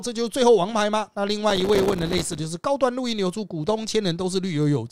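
Speech, with processor overload crackle from 1.50 to 2.39 s: the processor keeps missing its deadlines, leaving many tiny silent gaps with hard edges, which fits buffers of roughly 3 ms. The waveform shows dense dropouts to near silence, and the spectrogram shows closely spaced vertical broadband stripes.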